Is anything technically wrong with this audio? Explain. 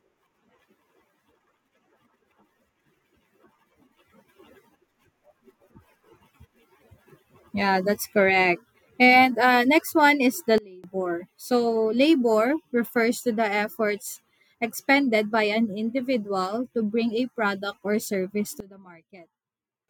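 Yes. Sudden gain jumps occur at 10.58 to 10.84 s and 18.60 to 19.88 s. The speech and background noise drop together, by about 24 dB, then about 20 dB. The likely cause is digital gain changing instantly, with no ramp.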